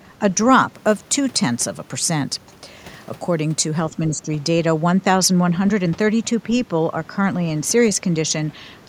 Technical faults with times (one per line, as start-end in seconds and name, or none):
3.91-4.29 speech suppressed in double talk